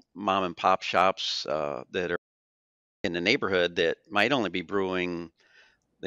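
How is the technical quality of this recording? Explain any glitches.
The recording has one clear glitch, an audio dropout to silence from 2.16 s to 3.04 s. The input feed was most likely interrupted, by a disconnected device, a broken link or a mute, while the recorder kept writing silence for about 0.88 s. The speech stops abruptly mid-flow and resumes just as suddenly, and the gap between holds no room tone at all. Whatever was spoken during that stretch is lost.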